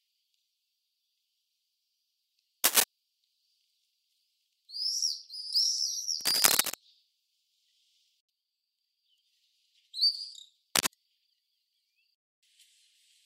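Cable scratch noise at 2.64–2.84 s, well above the sound, then 6.21–6.75 s and 10.75–10.90 s: rustly broadband bursts, likely a worn connector, showing as ragged vertical smears.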